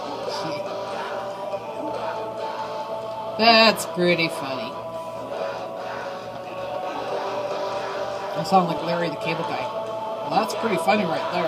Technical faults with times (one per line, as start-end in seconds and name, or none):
6.58-8.78 doubled audio track